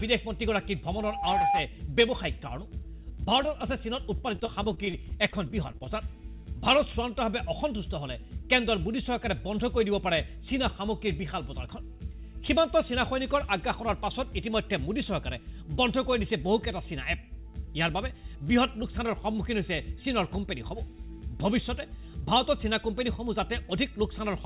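From 0.90 s to 1.69 s a loudspeaker feedback squeal appears. The microphone is picking up the speaker it drives, and the loop gain has gone past unity at 804 Hz. That single tone builds over about half a second and rises to about 5 dB above the programme before it stops. It is heard as a pure, swelling whistle sitting on top of the sound.

From 4.18 s to 5.87 s there is repeated packet loss, giving a robotic sound. About fifteen short holes are patched by extending the preceding audio. The longest hole is around 30 ms, and roughly a sixth of the stretch is concealed. The rapid succession of these fills produces a choppy texture with small pieces of the sound missing. Across the clip, nothing is heard above 4 kHz, which fits a G.711 mu-law call path at 64 kbps.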